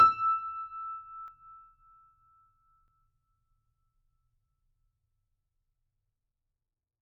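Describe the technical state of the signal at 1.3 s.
At 1.28 s the music jumps forward with no gap, as if a sliver of the passage had been snipped out and the two ends pressed together. That points to a dropped buffer (overrun), likely: the software failed to collect a block of samples before the hardware wrote over it, so roughly 40 ms of audio is gone and the sound on either side is spliced directly.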